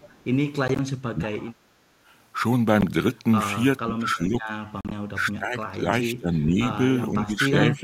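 A far-end echo canceller, likely working from a loudspeaker, lets some of its microphone pickup return down the line, so this speech opens with an echo leak from 0.00 to 0.24 s. A delayed copy trails the talker by about 458 ms, very faint at roughly 30 dB below the main level. The wireless link to the headphones then fails to deliver audio in time, the likely cause of three Bluetooth dropouts. From 0.68 to 0.79 s, about 40 ms goes missing in short silent holes of up to 13 ms scattered over roughly 107 ms. A single 13 ms gap falls at 2.81 s. From 4.81 to 4.92 s, about 67 ms is lost, with one run of 40 ms. The hole sizes fit packets of about 13 ms each. The audio resumes each time as though it had kept playing. Finally, the echo canceller, likely confused by both sides talking at once, turns the near talker down as speech suppressed in double talk. The voice dips or breaks up from 0.99 to 1.50 s, 3.85 to 4.53 s, 5.13 to 5.86 s, 6.08 to 6.68 s and 7.11 s to the end. 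The deepest cuts are about 25, 20, 15, 15 and 10 dB.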